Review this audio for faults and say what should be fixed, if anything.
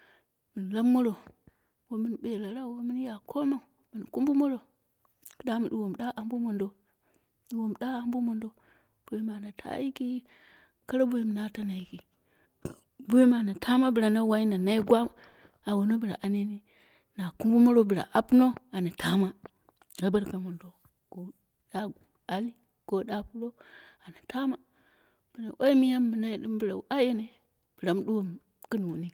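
Nothing in this audio needs to be fixed, as no faults can be heard.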